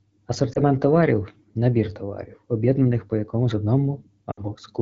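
Lost AMR speech frames occur at 0.54 to 0.59 s and again at 4.31 to 4.40 s. Radio errors corrupt frames so they fail their checksum, and the wideband decoder, whose light coding character points to around 12.65 kbit/s, fills each gap by repeating the last good pitch and vocal tract settings at falling gain. The first is a brief dip, consistent with one 20 ms frame. The second is a longer drop to near silence, fitting about 60 ms, before the speech returns briefly weak or rough.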